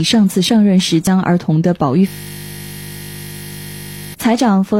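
From 1.07 to 1.10 s, an overlap between stream segments trims about 24 ms of audio, leaving a single tiny skip rather than a repeating pattern.

From 2.08 to 4.14 s, a system hang loop replays one 20 ms buffer about a hundred times, producing a steady 50 Hz buzz instead of machine-gun stutter.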